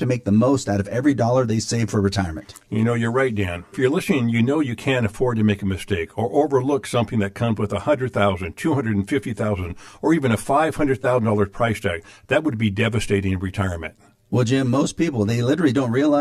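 From the first moment to the last, the speech has a hollow, phasey quality that never lets up. That's channel delay causing comb filtering: one channel is running around ten milliseconds behind the other, and when the two get folded to mono, whatever they share cancels at evenly spaced frequencies. With a gap that size the first notch lands down near 50 Hz, and the rest repeat every 100 Hz or so above it, carving a fixed hollowness into the voice.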